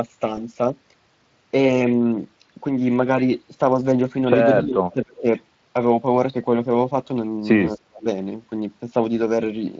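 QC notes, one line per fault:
0.35–0.39 s, VoIP packet loss concealed by the speech codec: A short piece of the speech goes smeared and buzzy for about 40 ms. The gap sounds like one lost 20 ms frame. The decoder filled it by repeating its last pitch and filter settings at falling gain. Each frame is built from the one before, so the sound stays weak and coloured past the gap before it settles.
4.62–5.25 s and 7.76–8.07 s, speech suppressed in double talk: The talker's level dips sharply. The drop reaches about 25 dB in the first stretch and about 35 dB in the second. Roughly half a second is affected in the first and about a third of a second in the second. The likely cause is both sides talking at once. The echo canceller could not tell the talker from the loudspeaker echo and turned everything down.
5.03–5.21 s and 7.67–7.80 s, echo leak: A faint, delayed copy of the speech sits under the signal, 249 ms behind the original. 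It is about 20 dB below the speech in the first spot and about 30 dB below in the second. It likely comes from a far end on loudspeaker whose echo canceller let part of the microphone pickup back into the call. Both spots overlap the double-talk dips.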